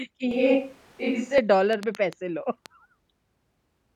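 From 0.31 to 1.38 s the speech turns hollow and roomy with thinner bass, a switch to a distant microphone, likely a fallback pickup, at little level change, noise near 30 dB down, reverb-smeared spectrogram.

From 1.73 to 2.67 s a train of clicks, likely interference, ticks irregularly at 4.32 per second, about five spikes peaking about 10 dB above the signal, thin vertical spectrogram lines.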